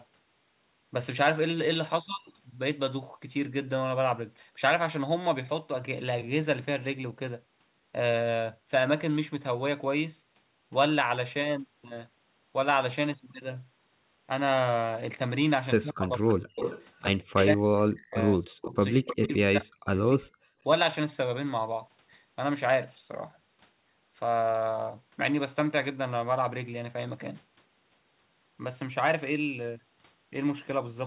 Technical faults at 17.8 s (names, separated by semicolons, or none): speech suppressed in double talk